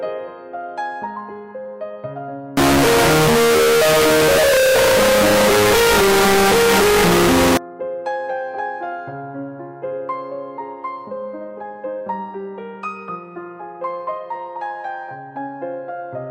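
From 2.57 to 7.57 s, the sound turns very loud and harsh. This is float read as integer. The likely cause is 32-bit float samples read as 32-bit integers. The waveform squares off at an almost fixed, high level. Quiet background noise becomes as loud as everything else, though pitch survives.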